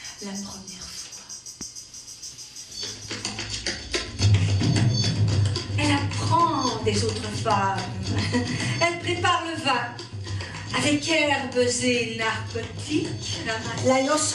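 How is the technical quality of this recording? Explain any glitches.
The technical quality is held back by MP2 compression, audible throughout the clip. The encoder had too few bits to spread across MPEG Layer II's 32 sub-bands, so upper bands drop out and flicker in and out while the remaining ones are quantised coarsely. The result is a dull, top-cut sound with a gurgling, grainy distortion riding on it. The damage is plainly audible and fits a low bitrate around 80 kbps, likely from a starved encode.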